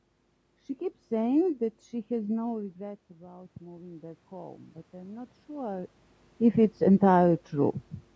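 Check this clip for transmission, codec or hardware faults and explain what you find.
One fault stands out: automatic gain rising in the speech between 2.46 and 5.98 s. Around 2.5 s the talker appears to move back, and the input falls by about 18 dB. The gain control treats this as a level that is too low and slowly raises its gain by about 9 dB over three and a half seconds. Voice and room noise swell together. On the waveform the envelope climbs steadily across that span, and the spectrogram brightens evenly at all frequencies, noise floor included. The call's microphone processing leaves nothing above 8 kHz.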